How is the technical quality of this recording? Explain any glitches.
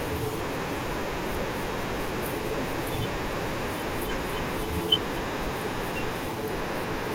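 The recording has one glitch, between 0.52 and 0.86 s: DAB burbling. Weak digital radio reception lets bit errors, here a small fraction of a percent, slip past error correction into the MP2 audio data. Corrupted samples put short blips of noise in single sub-bands, and corrupted scale factors make sub-bands jump in level for up to a frame, giving a burst of burbling over the speech. Unlike a dropout, the sound never goes silent; unlike steady low-bitrate swirl, it is brief and erratic.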